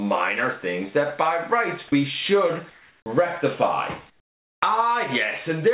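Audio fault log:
1.9 s, sound dropped by the voice detector: about 30 ms of real sound vanishes into brief steady noise, likely the detector mistaking a quiet stretch for background.
2.70–3.06 s and 4.10–4.62 s, comfort noise in place of the background: the real background turns flat and featureless, about 2–3 dB quieter, likely synthetic fill while sending paused, all within the call's 4 kHz narrowband sound.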